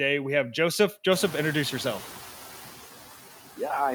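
Throughout the speech, noise suppressor artifacts are audible. The suppressor pulls down bands it judges to be steady noise by about 7 dB, so the background dips in the gaps and swells under speech. On a spectrogram the noise floor looks mottled and flickering.

From 1.11 to 2.24 s, the noise suppressor is catching up. The room noise jumps by about 21 dB around 1 s, and the noise estimate takes about 1.13 s to follow. The noise first comes through with only about 5 dB of reduction, then sinks. The waveform shows a raised floor that tapers down.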